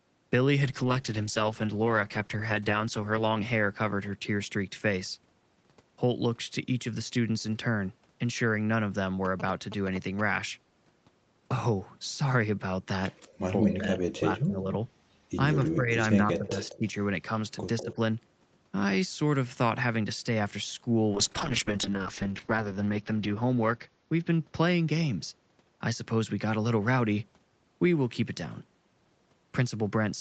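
Call bitrate drop, 0.64 to 4.59 s and again 21.14 to 27.31 s, roughens this speech recording: the call's bandwidth estimate fell and the Opus encoder went from 32 kbps down to 10 kbps in the first stretch, holding its lowest rate for about 2.6 s, and down to 7 kbps in the second, bottoming out for about 1.1 s, so the voice turns coarse, watery and muffled until the rate climbs back. GSM signalling bursts, 9.25 to 10.21 s, come from a nearby 2G phone exchanging short radio bursts with its network; the audio circuitry rectifies them into a galloping dit-dit-dit of short 217 Hz buzzes sitting roughly 10 dB under the speech. Echo leak, 13.17 to 14.42 s, 15.65 to 15.75 s, 16.33 to 16.78 s and 17.78 to 17.94 s, is a copy of this side's own voice arriving 197 ms late, about 5 to 15 dB below the main speech, likely because the far end was on a loudspeaker and its echo canceller let part of the pickup through and sent it back. 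Speech suppressed in double talk, 13.61 to 14.71 s, 15.56 to 16.83 s and 17.82 to 17.98 s, overlaps those echoes: while both sides talk, the voice dips by up to about 15 dB in the first two spans, for roughly 700 ms and 500 ms in total, and by about 5 dB for around 100 ms in the last, likely as the canceller, unable to separate talker from echo, turns everything down. The missing content above 8 kHz follows from the call path's normal bandwidth.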